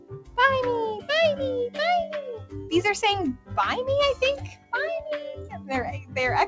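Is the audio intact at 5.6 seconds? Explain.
No. Between 5.34 and 5.70 s, a sound cut by the noise suppressor dips about 9 dB: the suppressor mistakes this sound for noise and pulls it down. Throughout the clip, a noise suppressor applied to music or sounds swings the level by around 10 dB, so held tails sink and pump while attacks pass.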